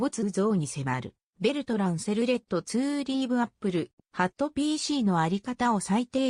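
No technical faults can be heard anywhere in the recording. Nothing in the sound stands out as a problem worth marking at any point.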